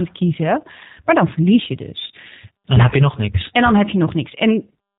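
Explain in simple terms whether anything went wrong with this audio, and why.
Yes, throughout the speech it is squeezed by the G.729 codec: muffled above 4 kHz, with a rough, synthetic edge, unlike simple muffling, which sounds smooth.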